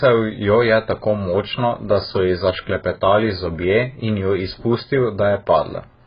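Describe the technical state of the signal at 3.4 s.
At 3.4 s the speech is dull, with nothing above 5 kHz and a warbling, smeared texture. It is present throughout and is likely heavy AAC compression at a bitrate near 12 kbps, which starves the spectrum; unlike a simple low-pass filter, it also leaves holes in the spectrum or fills bands with substitute noise.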